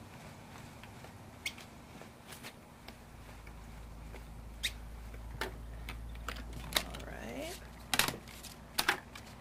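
From 2.09 to 7.15 s there's a call bitrate drop: quality sinks to what sounds like roughly 22 kbps for about three seconds, turning coarse and muffled before recovering.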